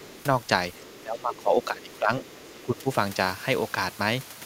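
From 0.00 to 0.23 s and again from 0.73 to 1.01 s, a faint second voice sits beneath the speech, some 25 dB below it. This is the other side's voice leaking through, likely residual echo that the canceller left in the microphone signal after the loudspeaker played the far end. Unlike reverberation, it is a distinct, separate voice rather than a smearing of the talker's own.

From 1.03 to 2.89 s the speech is suppressed in double talk. The talker's level dips by up to roughly 10 dB, and the dips add up to about a second and a half. The likely cause is the echo canceller failing to separate near and far voices while both were active, so it attenuated everything. Within that span, from 2.25 to 2.60 s, the far voice leaks through again, quieter, at around 30 dB below the speech.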